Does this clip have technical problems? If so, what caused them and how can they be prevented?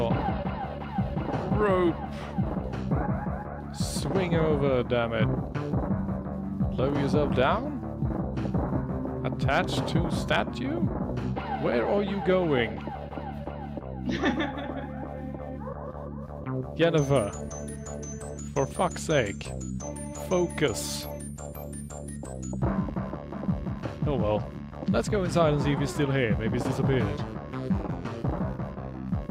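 No, nothing in this one stands out as a technical problem, so there's nothing here that needs fixing or preventing.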